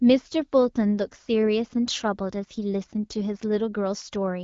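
No technical faults can be heard anywhere in the speech. The band stops at about 7.5 kHz and carries only light coding texture, which fits an AMR wideband (HD Voice) codec running at around 12.65 kbit/s as intended.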